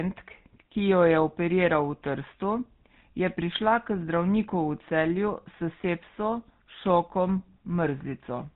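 From start to finish, the speech carries the GSM full-rate codec sound, and it's plainly audible. That codec rebuilds the voice from a vocal-tract filter fed by a coarse, regularly spaced pulse excitation, throwing away most of the fine detail, and it cuts everything above 4 kHz. The result is the familiar buzzy, gravelly roughness over a muffled, band-limited top end, which fits the old 13 kbps GSM phone-call coding.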